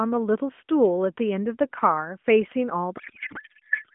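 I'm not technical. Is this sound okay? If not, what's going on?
No, there are two distinct problems.

At 2.52 s there is a bit error spike: a single sharp tick. One binary digit in the stored or transmitted sound flipped, so for a few consecutive samples the waveform jumped to a wrong value and then snapped back. The click isn't part of the speech. It's a brief burst of noise across all pitches, and it passes too quickly to damage anything around it.

From 2.98 s to the end of the clip there is a codec payload misread. This call uses the AMR narrowband mobile codec, which is why the speech has the thin, telephone-like quality of a band that stops below 4 kHz. Here the receiving side seems to have unpacked the compressed data using the wrong layout, which fits a mix-up between AMR's byte-aligned and tightly packed formats. The decoder still produces sound, but it's reading the wrong bits as pitch and tone information, so the speech turns into garbled, warbling noise that barely follows what was said.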